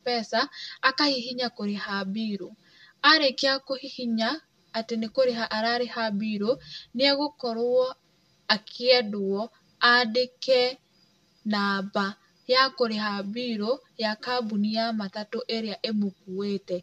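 Channel delay (comb filtering) runs through the whole speech clip. One channel arrives about 5 ms late, and the two are summed to mono. Shared content cancels at evenly spaced frequencies: a first notch near 100 Hz, then one every 200 Hz or so. The voice sounds hollow and phasey.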